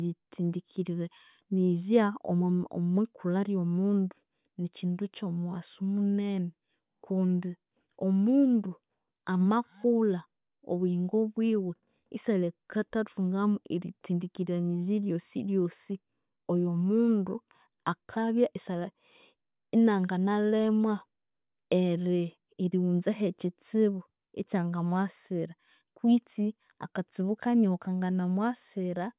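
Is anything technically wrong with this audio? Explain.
No technical faults are audible.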